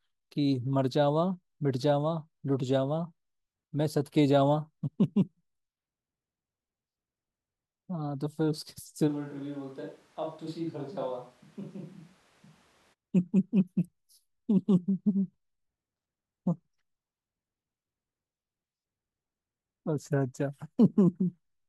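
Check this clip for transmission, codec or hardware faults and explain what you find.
One hardware-related fault stands out: a switch to a distant microphone between 9.10 and 12.92 s. The speech abruptly turns roomy and hollow, loses its low end, drops roughly 10 dB in level, and sits over background noise only about 25 dB below it. The likely cause is that the close microphone's signal dropped out and a farther pickup, such as a camera mic, filled in. On the waveform the envelope shrinks suddenly and the gaps between phrases fill with noise. The spectrogram shows weaker bass, smeared reverberant tails and a raised noise floor, with hard edges where the switch happens and where it reverts.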